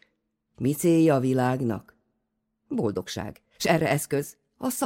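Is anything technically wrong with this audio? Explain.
Yes. A time-stretched section runs from 2.74 s to the end of the clip, where the speech suddenly plays about 1.45 times faster at the same pitch, sounding rushed. The likely cause is software squeezing that part to fit a length, dropping short slices of sound to keep the pitch.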